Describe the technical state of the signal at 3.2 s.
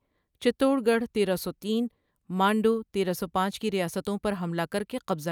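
At 3.2 s the speech signal is intact, with no audible technical fault at that moment.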